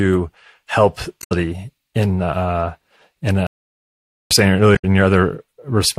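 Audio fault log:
1.19–1.32 s: damaged data in a compressed stream. A brief glitch cuts in as the decoder misreads corrupted frames and loses sync.
3.47–4.31 s: playback stall. The speech stops dead for about 0.84 s, then resumes. The player likely ran out of buffered data.
4.73–4.85 s: damaged data in a compressed stream. Another short glitch where corrupted bytes made the decoder hunt for the next frame.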